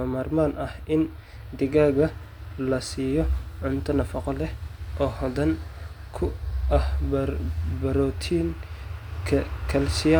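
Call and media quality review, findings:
Nothing stood out on listening to this speech recording.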